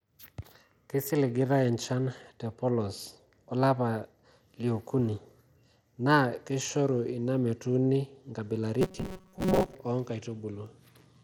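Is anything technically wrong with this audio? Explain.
Yes, two things. The whole clip has a crunchy, band-limited quality that's most likely Bluetooth SBC compression, which fits a link running around 96 kbps. With that few bits, the quieter upper bands get starved, so the treble flickers and a gritty, aliased haze sits on the speech.

Then from 8.81 to 9.75 s the speech turns into a rigid, metallic drone, likely robotic sound from repeated short buffers. Audio isn't arriving in time, so a tiny chunk of about 5.3 ms is replayed over and over for most of that stretch. That imposes a fixed buzz near 188 Hz that only loosely tracks the speech.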